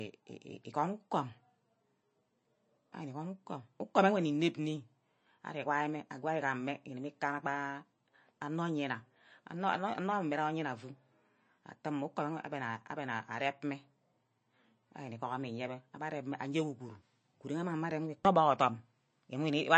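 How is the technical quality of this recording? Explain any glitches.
The recording has noticeable codec damage for its whole length. Throughout the clip, the speech stops dead above 8.3 kHz and has a plainly audible watery, swirling texture, with s sounds turning metallic and chirpy. The likely cause is MP3 compression at a very low bitrate, around 33 kbps, where the encoder cuts the treble at a fixed frequency and lets weak frequency lines flicker on and off between frames.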